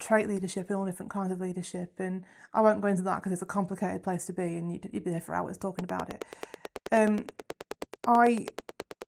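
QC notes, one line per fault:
5.79–9.03 s, train of clicks: Starting just after "be there for hours", a regular ticking runs to the end of the clip at about 9.3 clicks per second, roughly thirty in all, peaking around 15 dB above the speech. The pulses likely come from interference or a faulty connection. On a waveform they appear as evenly spaced sharp spikes standing well clear of the signal; a spectrogram shows thin full-height vertical lines, also visible over the light Opus coding's fullband content.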